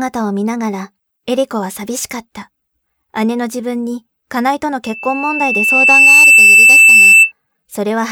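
A piercing 2.6 kHz tone swells over about a second and a half from 4.84 s, peaking well above the speech until 7.32 s: loudspeaker feedback squeal, where the microphone re-amplifies its own loudspeaker.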